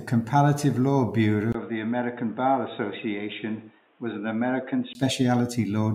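At 1.52 s a 20 ms gap precedes a sudden dull, boxy turn, likely an input switched to a poorer device. Until 4.95 s the speech is a few decibels quieter, spectrogram energy stops dead above 3.8 kHz, and a new faint noise floor appears.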